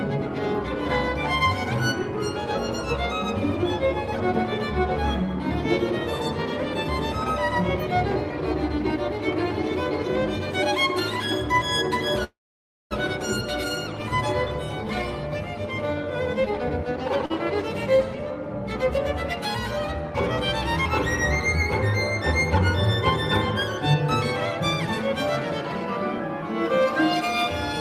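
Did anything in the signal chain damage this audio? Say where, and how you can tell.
Yes. From 12.24 to 12.93 s there is a call audio freeze, likely from packets held up on the network path so the receiver's jitter buffer ran empty. The last sound is carried on as a fading buzz or hiss, then about 0.57 s of silence. The audio then resumes exactly where it stopped, adding a delay of about 0.67 s. Nothing is skipped, which distinguishes it from a dropout.

At 17.26 to 17.32 s there is a short stall from a late packet, also at the network and jitter-buffer stage. The receiver stretched the last sound for 43 ms until the packet arrived, then continued with nothing lost. It is much shorter than the freeze and has no silent stretch.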